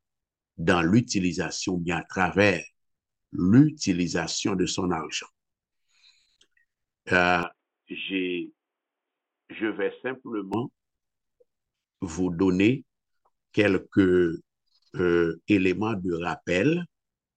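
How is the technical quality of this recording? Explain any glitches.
One glitch stands out, running from 7.43 s to 10.54 s. It sounds like the input switched to a poorer device, most likely another microphone or a headset's call profile taking over mid-recording. The narrower capture path passes nothing above 3.8 kHz, so the sound turns dull and boxy. The level falls by around 10 dB, and a different background noise appears roughly 55 dB below the signal. There is no gap at either switch. The brighter, fuller sound returns abruptly at 10.54 s.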